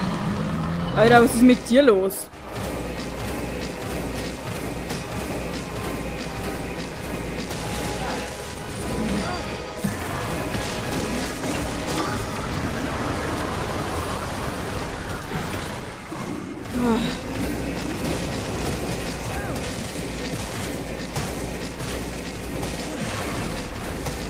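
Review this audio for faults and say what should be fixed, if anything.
No faults found in the audio, so there's nothing to fix.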